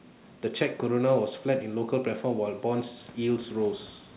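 Nothing's actually gone wrong in this speech clip: the room's background noise swells by about 18 dB around 3 s but still sits roughly 27 dB under the voice, and the dull, narrow sound with nothing above 4 kHz is just what a G.711 A-law call path at 64 kbps normally gives you.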